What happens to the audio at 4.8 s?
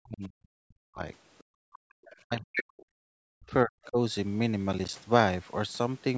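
From about 4.73 to 4.93 s the processor falls behind and misses a run of buffer deadlines. This is processor overload crackle. Each late buffer is replaced with silence, so the speech is chopped by short, hard-edged dropouts, and the spacing suggests about five missed buffers of roughly 10 ms each. The abrupt cuts in and out of silence sound like a brief gritty crackle over the speech that stops once the load eases.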